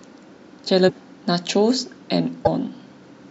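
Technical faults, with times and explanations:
0.88–0.91 s and 2.44–2.48 s, broken MP3 bit reservoir: each time the speech jumps ahead and a short disturbance of about 30 ms fills the gap. The likely cause is frames missing from the stream. The next frame then reads borrowed reservoir bytes that belong to a different frame and decodes nonsense. The burst length fits one frame of roughly 26 ms.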